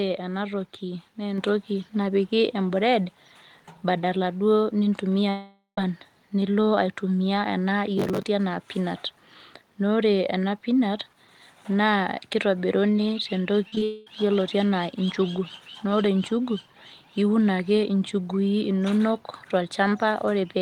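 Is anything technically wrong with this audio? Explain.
Yes, several faults occur in this speech clip.

At 1.38 s, just after "ena toki naa", the microphone volume is stepped up by about 4 dB in one jump, as the call software raises the input gain. Voice and background rise together. On a waveform the envelope steps up abruptly and stays there.

From 5.29 to 5.78 s, just before "nilo aitumia ena", there is what is likely a long network dropout. Roughly half a second of audio is lost. The last sound is stretched into a fading continuation, then about 0.11 s of near-silence follows before speech resumes with a piece missing. A spectrogram shows smeared, decaying bands, then a blank strip.

From 7.98 to 8.23 s, after "nilo aitumia ena", processor overload crackle appears. Around fifteen deadlines are missed, which fits buffers of roughly 10 ms, each replayed as stale audio with hard edges. 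It sounds like gritty tearing. The waveform shows a run of discontinuities, and the spectrogram shows vertical broadband streaks.

At 13.68 to 13.73 s, 13.75 to 13.77 s and 13.78 to 13.82 s, short concealed packet loss leaves gaps of 40, 10 and 30 ms. The decoder fills each by extending the preceding sound and blending back, giving brief smears and wobbles. Harmonics look frozen or blurred in short patches.

Immediately after, from 13.84 to 14.07 s, a further gap of about 0.22 s is likely another long network dropout. It is fully bridged by a fading continuation with no silent stretch, which shows up as a smooth decaying smear before the real audio returns.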